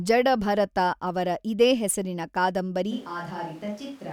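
At 2.93 s the speech turns hollow and roomy. Bass thins and the level falls by about 5 dB. Room noise rises to roughly 20 dB below the speech. The change is abrupt and lasts to the end. It is likely a switch to a distant microphone.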